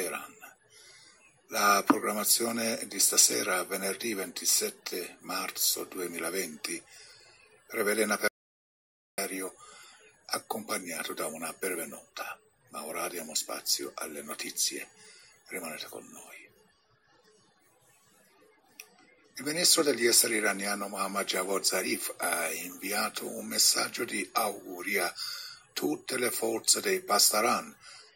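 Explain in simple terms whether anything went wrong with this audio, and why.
At 8.28 s the sound cuts to total silence until 9.18 s, an audio dropout to silence, likely from the input briefly disconnecting or muting. That 0.9 s is lost.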